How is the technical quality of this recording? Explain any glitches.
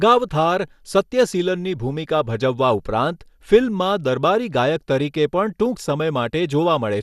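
The quality is noticeably compromised by compression. Throughout, the speech sounds dull and gurgly, with nothing above 12.2 kHz, likely MP2 compression starving its upper sub-bands, which fits a bitrate around 80 kbps.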